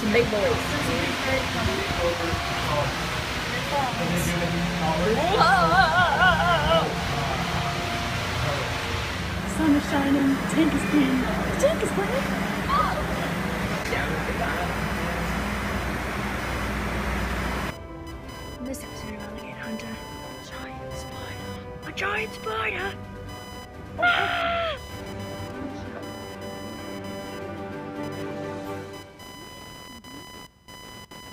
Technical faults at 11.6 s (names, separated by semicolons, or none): computer activity noise